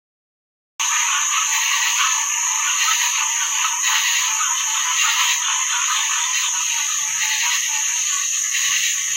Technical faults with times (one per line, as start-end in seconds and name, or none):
0.00-0.80 cut-off start